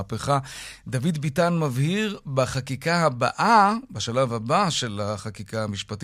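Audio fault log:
No fault found in this speech clip.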